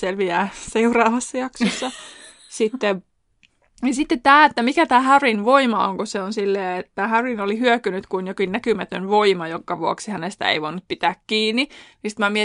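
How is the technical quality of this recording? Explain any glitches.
No glitches turn up anywhere in the recording. There is nothing to explain.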